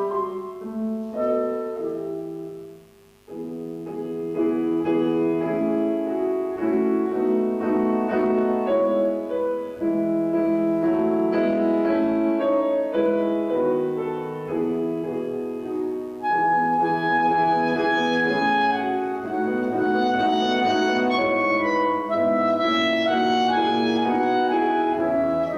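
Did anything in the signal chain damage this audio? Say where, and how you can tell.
Yes. Mains buzz runs through the whole clip, from the first second to the end, and it was picked up in the analogue wiring before conversion. It is a steady, raspy buzz sitting roughly 40 dB below the signal, built on a 50 Hz fundamental with a dense ladder of harmonics reaching into the kilohertz range. That rasp comes from sharp spikes, such as those from a dimmer, a rectifier or an unshielded run, repeating twice per mains cycle.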